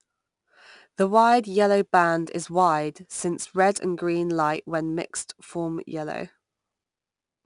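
A gritty hiss rides on every loud stretch of the speech from start to finish, with roughened attacks and nothing above 10.6 kHz. This is plainly audible 4-bit ADPCM compression, whose coarse prediction steps leave level-following noise, pointing to roughly 89 kbps.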